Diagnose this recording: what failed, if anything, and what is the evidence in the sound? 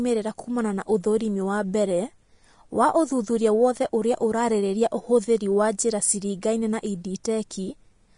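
The failure sits at the codec stage: throughout the speech the top end stops dead at about 10.6 kHz, and the treble below that edge is hissy and grainy rather than cleanly dull, with tones roughened and attacks softened. That is the signature of Vorbis compression, which is likely the cause. Its residue coding turns fine high-frequency detail into noise at a low bitrate, around 33 kbps. A plain low-pass filter would leave the remaining band smooth.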